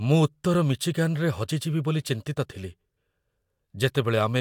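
No technical faults can be heard anywhere in the recording.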